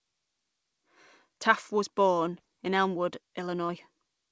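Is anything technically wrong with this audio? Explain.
Yes. Two brief short concealed packet losses occur. The first runs from 2.38 to 2.41 s, just after "was born", and the second from 3.67 to 3.72 s. In each, about 20 ms of the call arrived too late, and the receiver covered the gap by extending the preceding sound before blending back. This produces a momentary smear or wobble, and the second event also stretches timing by a few milliseconds. Unlike a plain dropout, there is no silent hole. The call path's band limit, with nothing above 8 kHz, fits G.722.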